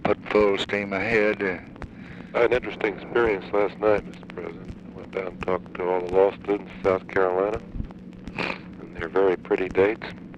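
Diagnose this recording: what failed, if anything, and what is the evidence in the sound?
Nothing failed; no faults heard.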